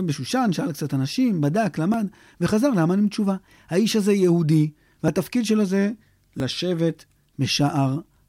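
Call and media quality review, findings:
Small skips ahead in the speech at 1.94, 3.48, 5.08 and 6.4 s, about 20 ms missing each, roughly double at 3.48. Likely dropped buffers (overrun) in capture.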